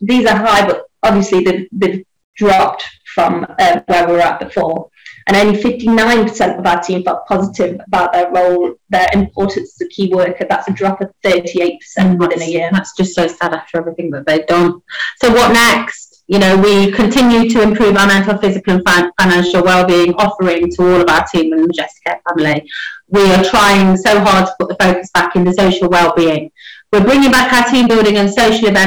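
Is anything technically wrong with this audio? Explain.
Yes. Hard clipping runs through the whole recording, from start to finish. The signal was driven about 19 dB beyond what a stage in the chain could pass, so every peak that crosses that ceiling is sliced off flat, and roughly a fifth of all samples sit pinned at the limit. Those squared-off tops add harmonics high up the spectrum, so every loud moment carries a harsh, gritty fuzz rather than occasional crackle.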